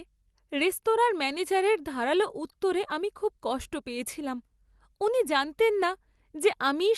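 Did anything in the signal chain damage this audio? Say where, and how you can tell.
No, nothing in the signal chain damaged this speech.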